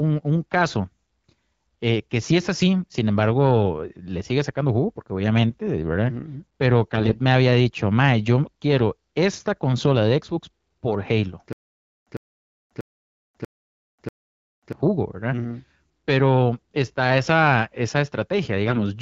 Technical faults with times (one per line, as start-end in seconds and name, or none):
6.92-7.21 AMR bit errors
11.53-14.73 stutter with silent gaps
18.66-18.79 AMR bit errors